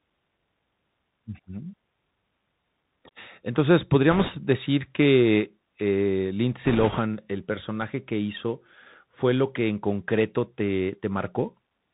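Throughout, the speech sounds narrow and muffled, with nothing above 4 kHz, a granular hiss underneath, scratchy s sounds and distortion on loud, bright moments. That is the Bluetooth CVSD headset codec, whose one-bit up-or-down steps, fitting a 64 kbps link, lag fast changes.

From 4.11 to 4.30 s, just before "decir que eh", and again from 6.65 to 7.00 s, between "decir que eh" and "el personaje que hizo", a rushing, crackly noise rises over the speech without sharp clicks. These are bit errors on a Bluetooth voice link, with a few percent of bits flipped. Each wrong bit nudges the signal by an amount that grows with the speech level, and fades.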